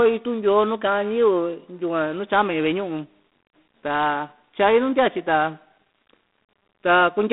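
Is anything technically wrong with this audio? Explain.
Yes. Throughout the speech, the sound carries G.726 ADPCM coding damage, and at a level that fits the 24 kbit/s mode. The codec sends only a few bits per sample describing the error of an adaptive predictor, so coarse quantisation leaves a harsh, rasping hiss that rises and falls with the speech level. The band is telephone-limited, roughly 200 Hz to 3.7 kHz, with nothing above 3.8 kHz, giving a thin, muffled top end.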